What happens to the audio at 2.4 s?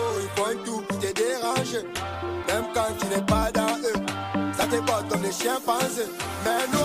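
At 2.44 s there's a repeated buffer. New audio didn't reach the device in time, so it replayed the last tiny chunk three extra times. Each chunk is about 1.45 ms long, which fits a 64-sample buffer. Because the pieces are so short and butt together with hard joins, you hear a click or brief buzz rather than a stutter. A few milliseconds of the real sound go missing underneath it.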